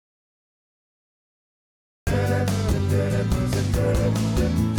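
The input feed was likely lost before the recording began, through a disconnected device, a failed link or an accidental mute, while the recorder kept writing silence. The result is an audio dropout to silence already under way when the clip opens, running from the start to 2.07 s. The gap holds no room tone at all, just dead air, and the sound then comes in abruptly mid-flow. Whatever came before that point is missing.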